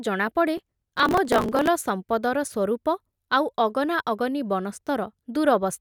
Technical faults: processor overload crackle

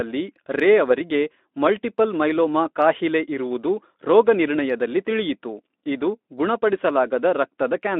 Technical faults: none

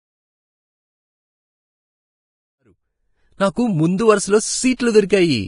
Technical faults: Vorbis compression; pre-echo

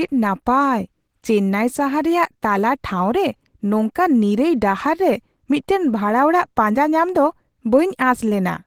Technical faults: Opus compression

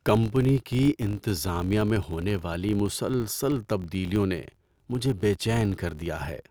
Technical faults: filter restarted on every block

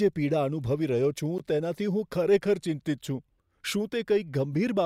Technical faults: gap at a join of encoded pieces

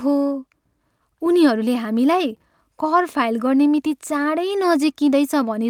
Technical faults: none

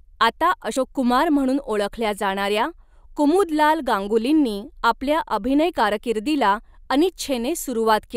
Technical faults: damaged data in a compressed stream

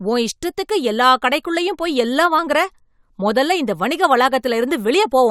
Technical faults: none

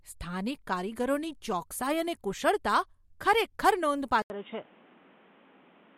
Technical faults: input switched to a poorer device

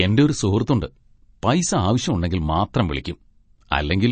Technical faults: MP3 compression; electrical switching spike

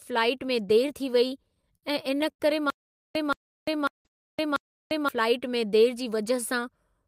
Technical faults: repeated stalls (stutter); stutter with silent gaps; call audio freeze; jitter buffer speed-up

